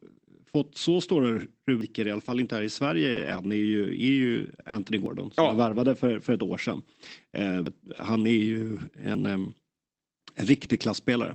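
Speech clip, carried over a call path with an 8 kHz band limit, containing two kinds of fault. Four jumps at 1.81 s (just after "fått så stora", before "i alla"), 5.06, 7.66 and 9.15 s each skip ahead with no silence. They lose roughly 150, 50, 150 and 50 ms, and are likely dropped buffers (overrun), where the capture data was overwritten before being read. Between 2.25 and 10.78 s, starting after "i alla", about three scattered short gaps, the longest around 40 ms, were concealed by extending the preceding sound, leaving brief ticks and smears.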